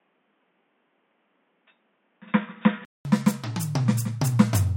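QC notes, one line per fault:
0.0–3.05 s, input switched to a poorer device. The music sounds dull and boxy, with nothing above 3.7 kHz. It is slightly quieter, over faint background noise. A 200 ms silence precedes the fuller sound, likely from a switch away from a narrowband input.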